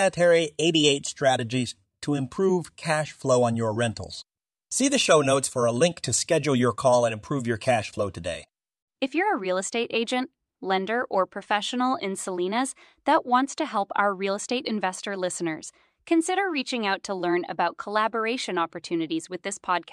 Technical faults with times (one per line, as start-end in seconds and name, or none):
none